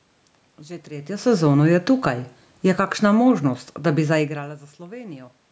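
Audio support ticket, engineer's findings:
Automatic gain falling, 1.91 to 4.7 s: level eases down about 6 dB over nearly 3 s, room noise sinking along with the speech. Input AGC judged signal too hot or background too strong and pulled gain back gradually. Level shifts near 1 s and 4 s are talker movement.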